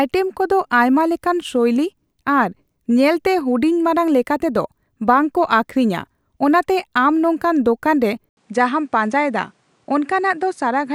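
At 8.29 s the speech cuts out for 80 ms, then returns duller and a bit quieter, with nothing above 10.8 kHz and a new noise floor underneath. Likely the input switched to a poorer device.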